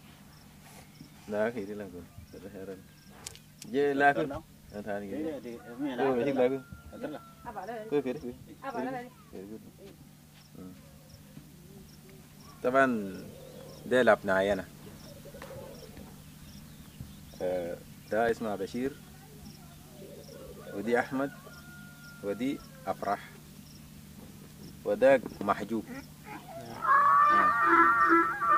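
From 18.10 to 19.05 s there are CD scratch ticks. Six short clicks arrive in under a second, a steady rhythm of about six per second. Each is tiny, the longest lasting only a millisecond or two. A blemish on the disc spoiled more data than error correction could rebuild, once per revolution. The player then patched or muted those few samples. The regular spacing gives the disc rotation away.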